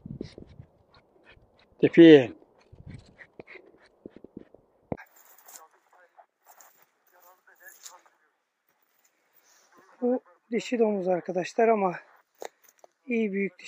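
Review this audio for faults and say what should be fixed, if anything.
Nothing needs fixing, as the signal holds steady throughout, with no dropouts, level jumps or other technical disturbances to point to.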